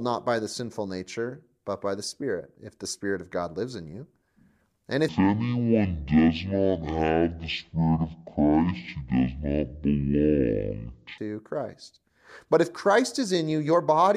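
From 5.08 s to 11.18 s, the speech plays as a section at the wrong speed. It runs at half speed, so this stretch drags out to twice its natural length. Pitch falls with it, by roughly ten semitones, and the voice turns deep, slow and heavy. The change is abrupt at both ends. Speed and pitch move together here, which likely means the section was played or rendered against the wrong clock.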